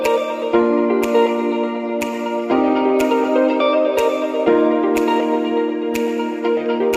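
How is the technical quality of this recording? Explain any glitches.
Nothing in the recording stands out as a glitch, and there's nothing here that needs explaining.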